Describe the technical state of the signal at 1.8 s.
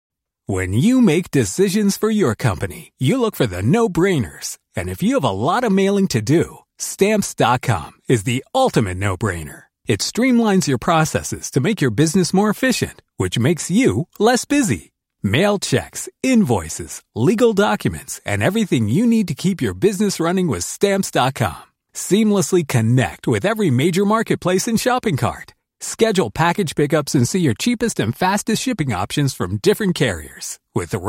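At 1.8 s the speech signal is intact, with no dropout, distortion, or other technical fault.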